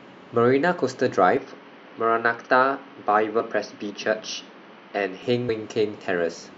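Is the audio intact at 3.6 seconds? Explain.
No. From 1.37 to 5.23 s the speech loses everything above 6.2 kHz and turns duller, with a faint new noise floor. The likely cause is an input switched to a poorer device. A spectrogram shows a flat ceiling at 6.2 kHz; the waveform shows no gap or level jump.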